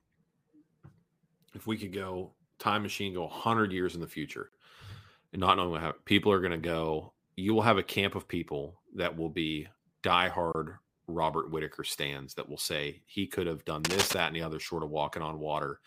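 It's a speech clip with two kinds of problems. First, there's a gap at a join of encoded pieces: right after "years in the future" the sound drops out from 4.49 to 4.52 s, about 37 ms, and again from 10.52 to 10.55 s, about 24 ms, just before "robert whitaker stands that". They're six seconds apart, so it sounds like the audio was encoded in 6 s chunks and stitched together without trimming each run's start delay and end padding. You get short holes with smeared edges, and then the speech picks up where it left off. Second, between "he could have done" and "that and the other", from 13.85 to 14.14 s, there's cable scratch noise. It's a dense, uneven burst of scratchy rustle riding over the speech at roughly the same level as the voice. That's most likely a worn cable, connector or control being moved during recording, with the contact resistance jumping around.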